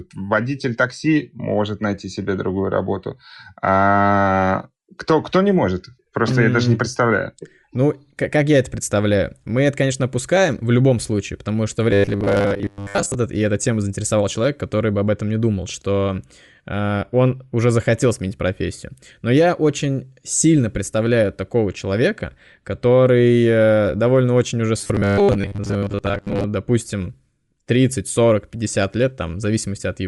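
Throughout, the speech has a breathy, grainy edge with noisy, thin highs. This likely comes from Bluetooth LC3 compression filling discarded upper bands with noise.

From 11.91 to 13.15 s, after "любом случае потому что" and before "и эта тема заинтересовал", the speech becomes a rigid metallic buzz at 100 Hz. This is robotic sound from repeated short buffers. A 10 ms buffer is likely being looped while most of the real audio is skipped. The same buzz returns from 24.78 to 26.44 s, after "э довольно очень уже".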